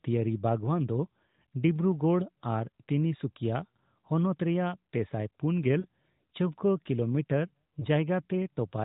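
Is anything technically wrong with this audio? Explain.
Yes, there are two short dropouts from lost AMR speech frames. The first runs from about 5.80 to 5.86 s, which fits two missing 20 ms frames. The second, from 7.80 to 7.86 s, fits a single lost frame. When a frame arrives corrupted, the decoder reuses the last good pitch and vocal-tract settings at reduced gain. What you hear is a quick dip and warble, slightly longer at 5.8 s, with the speech a touch rough as it recovers. All of this sits within the narrow, sub-4 kHz band of the AMR narrowband codec.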